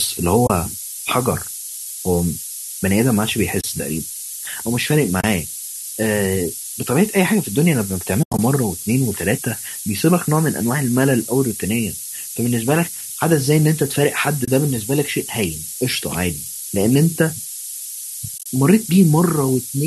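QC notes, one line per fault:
throughout: low bit depth with noise shaping. The speech is held to about 5 bits. Rounding error is pushed upward, so a thin hiss, roughly as loud as the speech, climbs toward the top.
0.47, 3.61, 5.21, 14.45 s: AAC frame loss with muting. Each is a 30 ms soft-edged dropout. The decoder zeroes about three 10 ms frames, which fits the likely low-delay AAC stream.
8.23–8.39 s: AAC frame loss with muting. About 120 ms is lost, scattered over 160 ms. The longest silent stretch is roughly 100 ms, with fades at each edge.
18.38–18.46 s: AAC frame loss with muting. About 60 ms is lost over 80 ms, heard as broken, faded gaps, the longest around 30 ms.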